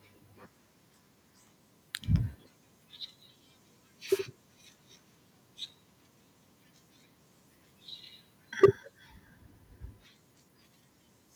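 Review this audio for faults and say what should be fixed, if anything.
At 4.07 s a wireless microphone noise hit breaks through. It lasts about 0.14 s, ending near 4.21 s. It sounds like a short swish of static over the speech. The analogue FM radio link fades briefly as reflected signals cancel the direct one. The receiver's own noise then rises into the audio. Placing the receiver antennas in clear line of sight of the transmitter, with diversity reception, prevents these dropouts.

From 8.63 to 8.66 s the loudest peak turns harsh and crackly. This is microphone overload. The input level is likely set too high, so the peak runs about 8 dB past the converter's limit. Roughly two fifths of the samples in that stretch have their tops flattened. That flattening creates the gritty edge. Lowering the microphone's input gain so peaks keep several decibels of headroom prevents this clipping.

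At 8.64 s, in the middle of that distorted peak, the level drops suddenly. The speech and the background fall together by about 2 dB. This is the microphone volume stepped down in a single jump. The call software likely reacted to the clipping by lowering the device's input volume at once. The step is audible because it happens in one move instead of a gradual fade. Setting a sensible fixed input level and disabling automatic microphone gain adjustment prevents these sudden steps.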